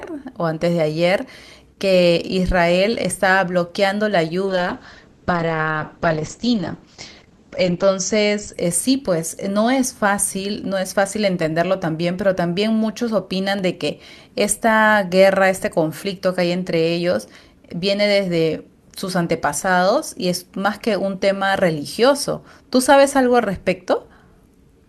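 A speech recording carries two faults. From 4.46 to 8.59 s a call bitrate drop takes the encoder from 48 to 9 kbps, holding the lowest rate for about 3.45 s. The sound turns coarse and muffled, and a spectrogram shows the top band collapsing from 20 kHz to a hard ceiling near 8 kHz. At 13.59 s a block of digital silence lasting 0.75 ms is heard as a tick or dip. On the waveform it appears as a tiny near-silent notch with abrupt edges, and as a thin full-height vertical line on a spectrogram.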